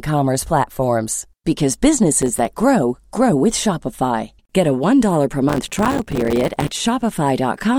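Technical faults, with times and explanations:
2.22–2.48 s and 5.49–6.71 s, processor overload crackle: the processor repeatedly missed its buffer deadlines, leaving many brief silent gaps with hard edges, heard as gritty crackle over the speech. It lasts about a quarter second before "grow grow with", then over a second later on. The gaps point to buffers of a few milliseconds. On the waveform these appear as rapid short dropouts with abrupt edges, and on the spectrogram as clustered thin vertical broadband streaks.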